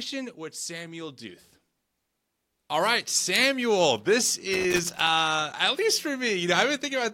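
A worn or dirty contact somewhere in the signal chain started making and breaking connection from 4.54 s to 5.07 s, producing loose connector crackle across roughly half a second of the speech. Each time the contact opened, the signal was chopped off, and each time it closed, any DC sitting on the line snapped back in as a pop. The result is an irregular, scratchy burst of crackle laid over the audio for that stretch.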